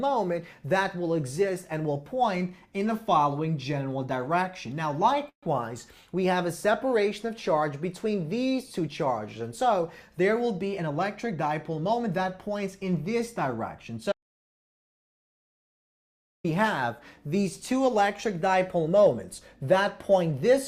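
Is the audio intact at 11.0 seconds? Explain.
No. A jitter buffer speed-up runs from 10.65 to 12.63 s. The receiver's buffer had built up more audio than its target, so it trimmed the backlog by cutting out many short slices, each one or a few pitch periods long, in quick succession. Together they take out roughly 150 ms, so the sound plays at about 107% of normal speed with its pitch unchanged. It comes across as slightly hurried, with the timing pushed forward.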